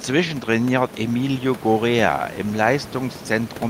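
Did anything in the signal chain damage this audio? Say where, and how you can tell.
No, nothing in the signal chain stood out on listening; the only background is ordinary room noise sitting well beneath the speech.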